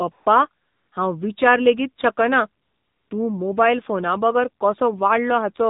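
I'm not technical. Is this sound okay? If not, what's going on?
No, it isn't. The whole clip passes through the AMR narrowband mobile codec, the speech format used on older mobile phone calls. Everything above 4 kHz is gone, so the voice sounds thin and boxed in. The codec rebuilds the voice from a rough model of the mouth and throat, using very little data here. That makes the speech plainly buzzy and artificial throughout.

There is also AMR comfort noise in three places: 0.12 to 0.26 s, 0.62 to 0.92 s, and 2.62 to 3.10 s. The last one comes right after "विचार लेगीत शकना". In each gap the phone decided nobody was talking and stopped sending the voice. The receiving end filled the pause with smooth, fake background hiss. That hiss switches on and off, and the real background disappears for up to about half a second.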